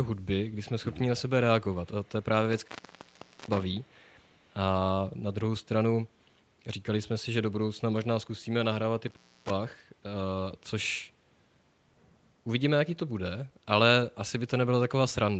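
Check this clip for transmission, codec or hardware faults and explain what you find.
Two hardware faults and one echo problem are audible in this speech, which is band-limited to 8 kHz by its Opus call path.

An intermittent contact cuts the audio from 2.53 to 3.63 s and from 9.08 to 9.50 s. A loose connection opens for about 0.8 s and 0.25 s, leaving crackle at each edge and faint hiss between.

An echo leak appears from 3.83 to 4.41 s: a very faint copy of the speech, roughly 40 dB down, trailing by 253 ms, likely loudspeaker pickup that the far end's echo canceller missed.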